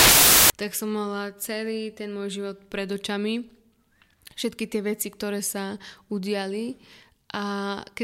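From 0.0 to 0.5 s the speech is buried under loud, harsh broadband noise, the signature of samples built from the wrong bytes. The reader has assembled each sample with its bytes misaligned or in swapped order, so the rapidly varying low bits land in the high, loud part of every value. Unlike ordinary hiss or dither added on top of a clean signal, this noise replaces the sound outright.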